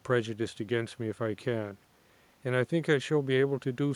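No technical faults can be heard in the speech. A faint room noise sits in the background, about 40 dB below the speech, and belongs to the recording itself.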